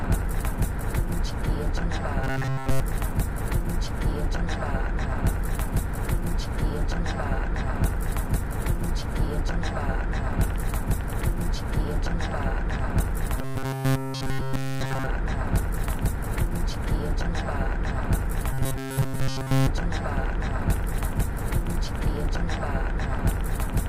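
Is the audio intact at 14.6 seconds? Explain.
No. At 14.6 s you're inside a stretch of robotic sound from repeated short buffers, running 13.38 to 15.07 s. New audio is arriving too late, so the playback keeps looping the last tiny slice while the real material gets skipped. Here that's essentially all of it. The loop rate puts a rigid 133 Hz metallic buzz over everything, which fits a buffer of roughly 7.5 ms, likely from playback falling behind.

On top of that, a train of clicks runs from 10.44 s to 23.87 s, so it covers this moment too. There are about 50 sharp, similar-looking ticks at an uneven pace of around 4.3 per second, poking up to about 5 dB above the sound itself. The likely source is interference from nearby equipment or a faulty connection or power supply.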